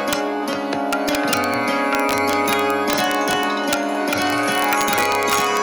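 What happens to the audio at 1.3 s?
Sharp, violent cracks hit the loudest peaks at 1.3 s, as they do across the whole clip: integer overflow. The signal runs about 1 dB past the largest integer, so the few samples over it wrap to the opposite sign rather than being limited.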